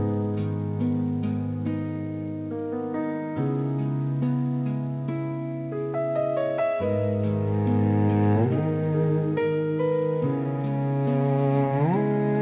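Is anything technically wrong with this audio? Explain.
No, nothing here is technically wrong.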